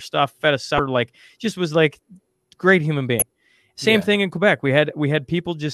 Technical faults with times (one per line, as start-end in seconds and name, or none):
0.76-0.79 damaged data in a compressed stream
3.19-3.22 damaged data in a compressed stream